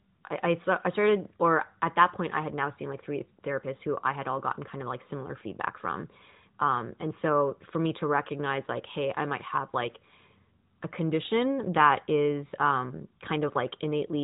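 Nothing here counts as a technical fault; the speech simply carries the narrow, phone-like band of an AMR narrowband mobile codec, with nothing above about 3.8 kHz and only light codec colouring.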